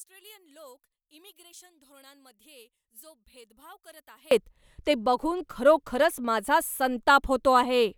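From the start to 4.31 s, the speech sits about 28 dB down. The centred voice and its low end nearly disappear, leaving only a faint trace. The likely cause is one channel inverted: one stereo side has flipped polarity, so the shared centre cancels when the two are summed to mono. Full level and body return right before "ते बघून खरोखरच माझा".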